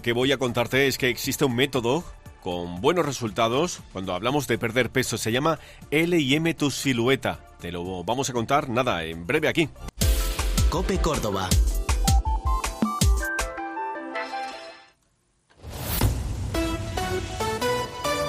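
No faults are audible anywhere in the recording.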